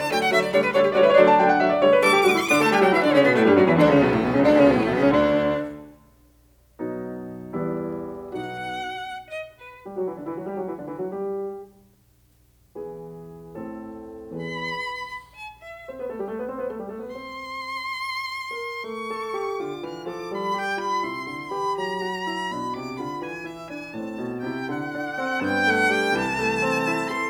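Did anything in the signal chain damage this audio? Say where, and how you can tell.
Yes. Between 13.65 and 14.65 s the music goes slightly dull and loses some air at the very top, then snaps back. That's channel delay (comb filtering), likely from a driver or buffer stage slipping one channel by a single sample. At that tiny offset, roughly 0.02 ms, summing to mono only cancels right up near 20 kHz, so you don't get obvious hollowness, just a softened top end for about a second.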